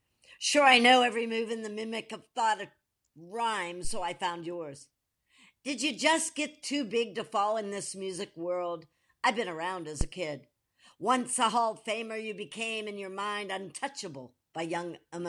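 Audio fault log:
3.84–4.04 s, phantom power thump: right after "of thought of rhyme" and before "I found yours", a low thud peaks at about -23 dBFS and dies away in 44 ms. A supply switched on or off on the live input sends a DC step through the coupling capacitors, which the capacitors pass as a single deep pulse.
10.01–10.08 s, phantom power thump: following "I've been around as", a second, harder thud reaches about -15 dBFS and fades in 15 ms, another supply step through the coupling capacitors.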